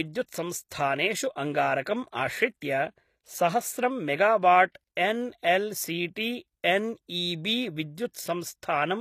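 Speech runs through HE-AAC compression damage for its whole length. The treble sounds synthetic, and s sounds turn gritty and metallic. That fits spectral band replication copying lower bands upward. The likely cause is HE-AAC coding at a low bitrate near 24 kbps.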